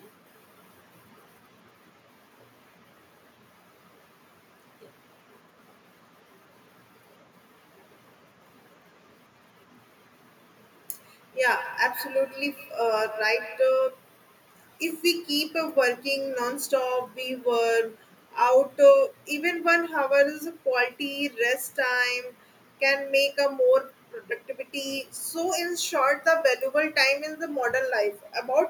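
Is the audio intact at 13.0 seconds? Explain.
No. From 10.96 to 13.86 s the speech comes back about every 150 ms, each repeat thinner and more ringing, peaking at about 15 dB below the speech. This is feedback echo between two devices: a second device on the call replays the audio into a microphone whose echo canceller cannot remove it.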